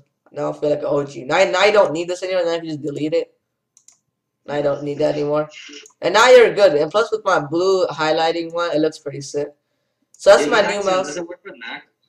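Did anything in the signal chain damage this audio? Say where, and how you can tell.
No, nothing in the signal chain audibly damaged this audio.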